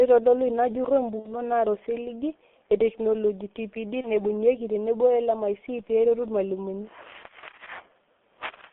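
Throughout, the speech sounds heavily muffled and hoarse, with smeared consonants and nothing below about 250 Hz or above 3.5 kHz. This is the G.723.1 codec, most likely at about 6.3 kbit/s. Its slowly updated voice model across 30 ms frames blurs fast detail.

From 1.19 to 1.42 s, between "eitodolua ina jurro" and "naata osiligi etekinoloji", the sound stretches out and fades, and stays weak afterwards. This is VoIP packet loss concealed by the speech codec. Roughly 60 ms went missing, which fits two lost frames. The decoder extrapolated from its last pitch and filter, and recovery lagged behind the returning packets.

From 4.01 to 4.08 s, just before "naibung'ieki tenebo", a shorter stretched smear marks the same concealment, which fits a single lost 30 ms frame.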